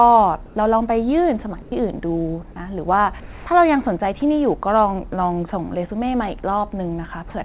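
A speech clip carried over a narrowband call path: nothing above 4 kHz, which fits G.711 A-law at 64 kbps. In the pauses at 0.46–0.56 s, 1.62–1.72 s and 3.20–3.46 s, the real background, sitting about 19–20 dB below the loud speech, gives way to comfort noise in place of the background, a steady, featureless hiss. It is about 3 dB louder, about 1 dB quieter and about 1 dB louder respectively, likely from discontinuous transmission filling the gaps with synthetic noise. At 4.20–4.22 s, 20 ms of speech is replaced by the same flat noise. This is likely sound dropped by the voice detector, where the sender misjudged a quiet stretch as background and the receiver substituted comfort noise until speech resumed.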